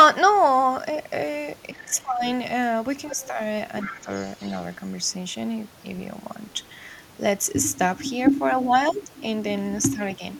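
From 1.7 to 2.22 s the speech is pulled down, by up to about 15 dB. This is speech suppressed in double talk. The likely cause is an echo canceller that could not tell the talker from the loudspeaker echo, so it turned both down. Straight after, from 2.24 to 2.31 s, a faint second voice appears, about 25 dB below the speech. This is the other side's voice leaking through. The echo canceller likely left part of the loudspeaker signal in the microphone. The leak returns at 3.11 to 3.27 s, louder this time, about 15 dB down. Overlapping it, from 3.13 to 3.39 s, the speech dips again by about 5 dB. From 3.77 to 4.76 s the second voice runs longer, again about 15 dB down. Within that stretch, from 3.83 to 4.09 s, the speech drops by about 10 dB.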